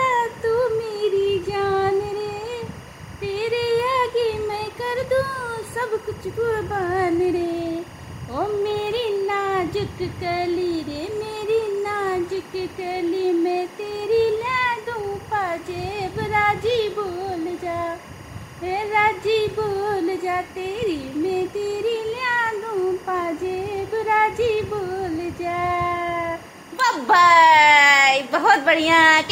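A steady chirping warble sits well below the sound for the whole clip: timecode bleed, 24-frame linear timecode leaking in, flipping between roughly 1 and 2 kHz.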